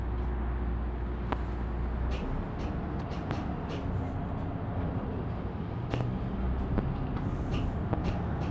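At 1.32 s a loud pop cuts across the sound. It peaks about 20 dB above the audio around it. The sound carries on underneath. A sudden voltage pulse was likely added to the signal, from a plug, switch, static or driver glitch.

At 3.00 s the audio skips ahead. Roughly 0.7 s of sound is missing. There is no gap and no fill. The two sides of the jump are butted almost directly together. A stretch was dropped while later audio was already waiting, as when a jitter buffer overflows and discards its backlog.

More loud pops follow, all about 20 dB above the sound. There is a single pop at 3.31 s. A pair of pops sits between 5.94 and 6.03 s. Another single pop comes at 6.78 s. A final pair falls between 7.93 and 8.11 s. Each is a sharp, brief pulse over the continuing audio. The band-limited call audio, with nothing above 8 kHz, runs beneath them.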